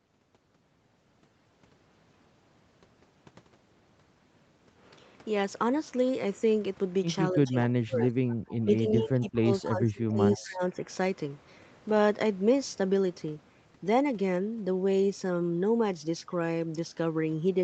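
From 7.32 to 8.21 s the voice dips by up to about 25 dB. Roughly half a second of it is hit. This is speech suppressed in double talk. The likely cause is both sides talking at once. The echo canceller could not tell its own talker from the loudspeaker echo, so it turned everything down. The same dip returns from 8.61 to 9.5 s, with about 0.7 s affected, and again from 9.68 to 10.21 s. The last one runs from 10.38 to 10.62 s and is shallower, at about 20 dB.

Around these dips there is echo leak. A copy of the voice comes back 251 ms late. The likely cause is a speakerphone on one side whose canceller left some of its microphone pickup in place. The first scrap, from 8.29 to 8.55 s, sits about 25 dB below the speech. Shorter bursts follow at 9.64 to 9.68 s and at 10.31 to 10.45 s, each about 20 dB down. They sound like faint, late repeats. The whole clip is band-limited to 8 kHz, which fits Opus at around 32 kbps.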